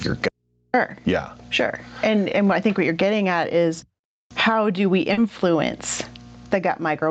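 Speech carried over an Opus call path, with content stopping at 8 kHz as that codec bandwidth and the call microphone processing would give. Throughout the clip the level pumps, over a gain swing of around 20 dB. Loud and soft parts sit closer together than natural delivery would, and the speech sounds squashed. The likely cause is microphone gain set far too high, with a fast limiter or compressor clamping down on every loud sound and releasing in the gaps. From 0.29 to 0.74 s there is an audio dropout to a faint residue. The signal cuts out abruptly for about 0.45 s and leaves only mains hum roughly 55 dB below the speech level, then returns just as suddenly. That hard edge sets it apart from a pause or a fade. This is likely a break in the signal ahead of a stage that stayed live, so the open input passed its hum through. At 5.13 to 5.18 s, 40 ms of audio went missing and was covered by short concealed packet loss. 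The decoder extended the preceding sound, following its pitch if voiced or as shaped noise if not, then blended back into real audio, which leaves a brief smear at that point. Two single-packet losses were rebuilt from error correction, at 5.17 and 5.39 s, each 10 ms. In each case Opus in-band forward error correction let the following packet supply a low-bitrate copy, so there is no gap, but those frames come out rougher and noisier than the surrounding audio.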